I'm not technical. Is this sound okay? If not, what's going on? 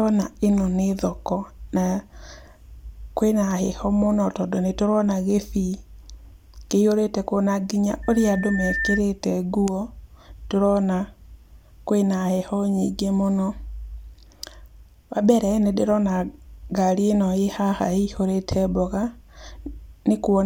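No. From 8.03 to 9.01 s there is a loudspeaker feedback squeal: a single 1.8 kHz tone swelling over most of a second until it's about as loud as the speech. Unlike a steady whistle or hum, it grows on its own because the microphone is picking up its own loudspeaker.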